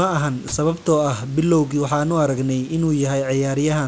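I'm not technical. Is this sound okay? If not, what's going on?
No. From 0.48 to 0.52 s, just before "sababtoo ah bilowgii waxaan", the sender's voice detector likely mistook quiet speech for background and briefly stopped sending. This is sound dropped by the voice detector: for about 40 milliseconds the speech is replaced by soft filler hiss.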